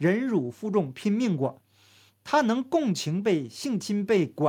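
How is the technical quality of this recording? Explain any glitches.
There are no technical faults or glitches to report in this speech recording.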